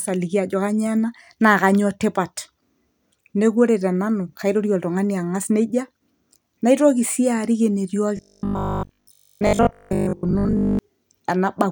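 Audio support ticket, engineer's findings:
Robotic sound from repeated short buffers, 8.17 to 10.79 s. Speech becomes a rigid metallic buzz at 50 Hz. Likely cause: starved playback buffer looping a 20 ms block. Most of that span is repeats, so real audio gets skipped.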